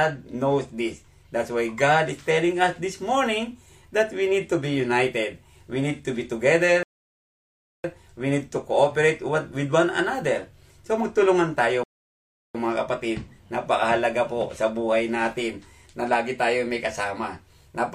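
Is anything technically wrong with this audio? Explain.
Yes. There are two rebuffering stalls. The first runs from 6.83 to 7.84 s and adds about 1.01 s. The second runs from 11.84 to 12.55 s and adds 0.71 s. In each case the player used up its downloaded audio and waited for more data. The sound drops abruptly to silence. Then it picks up at the exact point where it stopped. No audio is skipped. The gaps only stretch the timeline.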